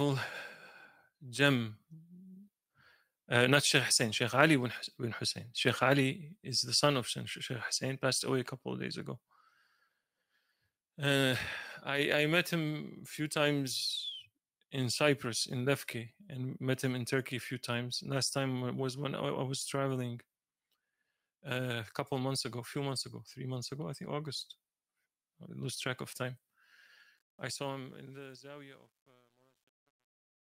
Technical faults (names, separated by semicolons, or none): truncation distortion on a fade